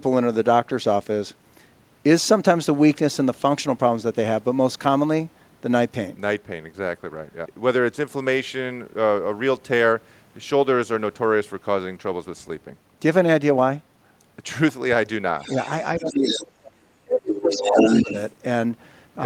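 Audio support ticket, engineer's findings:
Other side's voice leaking through, 15.39–15.69 s: faint second voice, well below the talker. Likely cause: loudspeaker pickup not fully cancelled by the echo canceller. Recurs 15.98–16.44 s only slightly quieter than the talker, and 17.32–18.32 s at roughly equal level, so the residual gets worse with each pass. Differs from suppression: an extra voice is added, not taken away.

Speech suppressed in double talk, 15.99–18.09 s, about 2 s in all: talker's level drops by up to roughly 30 dB while the far-end voice overlaps. Likely cause: canceller misreads both-talking as echo and attenuates the whole signal. Differs from leakage: the near talker is lost rather than an extra voice added.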